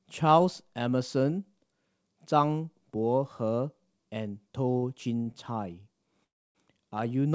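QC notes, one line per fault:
4.72–4.76, 4.77–4.84, 5.22–5.28 and 5.32–5.35 s: short stall from a late packet. Sounds are briefly held too long, with a slight buzz or dip. Packets arrived late, so the receiver stretched the last sound by 16, 48, 34 and 17 ms. Playback then resumed, with nothing lost.
6.24–6.57 s: call audio freeze. The sound stops and turns into a brief fading buzz or hiss, then about 280 ms of silence. It then resumes from where it stopped, with nothing missing. This is likely packets held up in transit, leaving the jitter buffer empty for 306 ms.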